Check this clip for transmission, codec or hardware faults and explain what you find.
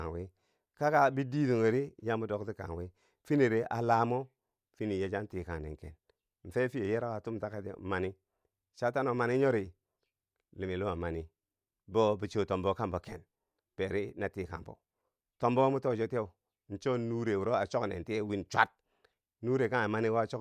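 No fault can be heard anywhere in the recording. The speech continues with nothing in the signal that needs explaining.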